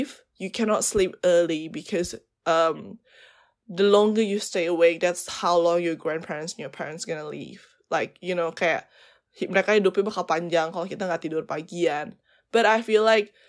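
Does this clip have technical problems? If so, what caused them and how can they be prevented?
No, nothing stood out as a technical problem on listening, so there is no cause to trace and nothing to prevent.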